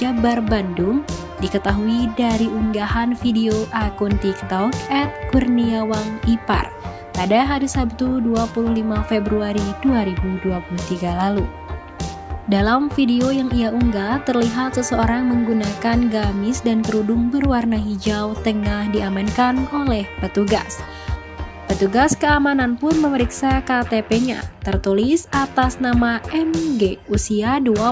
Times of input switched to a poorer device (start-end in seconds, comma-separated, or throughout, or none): none